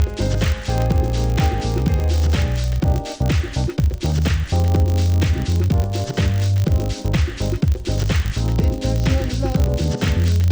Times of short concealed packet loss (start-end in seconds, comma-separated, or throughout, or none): none